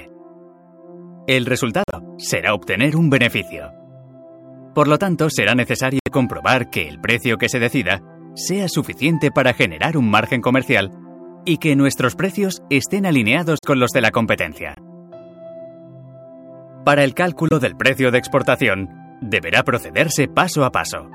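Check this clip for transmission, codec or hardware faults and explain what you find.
The clip has five dropouts from corrupt frame muting. They occur at 1.84–1.94 s, 5.99–6.08 s, 13.59–13.65 s, 14.75–14.79 s and 17.49–17.53 s. Each is 40 to 100 ms long. Damaged bits made compressed frames undecodable. The decoder rejected them, and the player inserted silence instead. Each gap spans a few frame lengths. The sound cuts off abruptly, then resumes on schedule, with no shift in timing.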